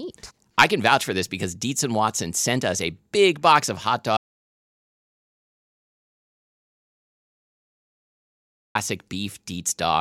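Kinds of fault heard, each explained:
Audio dropout to silence: from 4.17 to 8.75 s the speech drops to pure silence without room tone, likely an input lost while recording continued.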